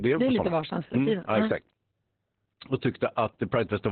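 From start to finish the speech sounds muffled, hoarse and faintly robotic, with nothing above about 4.2 kHz, so it has a telephone-like dullness. This is heavy Opus voice compression in its SILK mode, running narrowband. At so few bits the linear-prediction coder discards the upper band entirely and describes the excitation only roughly, which roughens the voice's texture. The degree of damage points to a bitrate of around 8 kbps.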